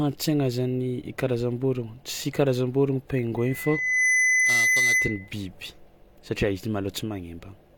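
Loudspeaker feedback squeal runs from 3.37 to 5.33 s. A microphone is hearing the loudspeaker it drives, and around 2 kHz the round trip through that loop adds gain rather than losing it, so the tone keeps reinforcing itself. It swells from nothing to a piercing whistle in under a second and settles about 5 dB louder than the speech, holding as a steady, narrow tone until the loop is broken.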